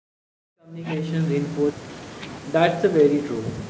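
Speech, with nothing technically wrong with it.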